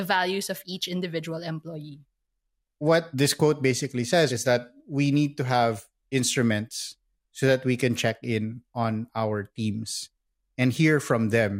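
Between 3.76 and 3.92 s, after "what this quote" and before "says is that we", the speech breaks into DAB burbling: a brief burst of noise laid over the voice. Weak reception let bit errors, at a rate of roughly 0.15 percent, slip past error correction into the MP2 data, so corrupted samples put short blips of noise in single sub-bands and corrupted scale factors made sub-bands jump in level for up to a frame. Unlike a dropout, the sound never goes silent. Unlike steady low-bitrate swirl, it comes in one short, lumpy burst.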